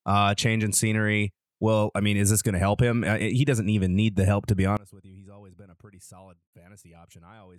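Right after "the help to be", at 4.77 s, the voice drops by about 26 dB through to 7.58 s, likely one channel inverted cancelling in mono.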